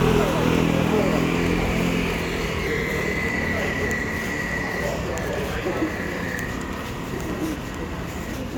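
At 2.65 s the audio jumps ahead. This is compressed frames skipped. Whole frames never reach playback, either missing or rejected by the decoder as damaged. The gap is about a tenth of a second, which fits four frames of 26.1 ms. Overlapping frames blur the join into a short smeared blip, not a click. At 8.32 s it happens again, larger. Around 0.4 s vanishes, pointing to roughly fifteen lost frames.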